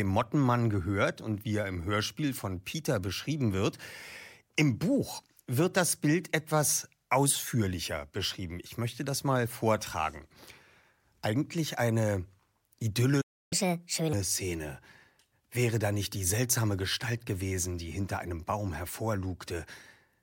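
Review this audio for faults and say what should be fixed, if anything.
A playback stall, likely from the player running out of data or a blocked thread, silences the speech from 13.21 to 13.53 s, a gap of about 0.3 s.

Catch-up at higher speed follows: the player resamples its backlog at 1.5 times normal speed from 13.53 to 14.13 s, raising the pitch about seven semitones.

A larger playback buffer and a gentler, time-stretching catch-up instead of plain resampling would prevent both the gap and the pitch jump.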